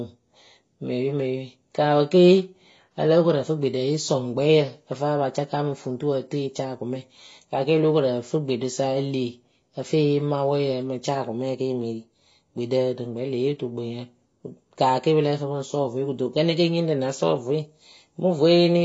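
The speech runs through a low-rate AAC compression stage for its whole length, with the encoder likely forced to discard much of the spectrum to fit a tight bit budget. The result is a top end that stops dead at about 7.5 kHz, leaving the sound dull and muffled, with a fizzy, warbling texture smeared over sibilants and sustained vowels. The codec damage is plainly audible and fits AAC-LC running at around 24 kbps.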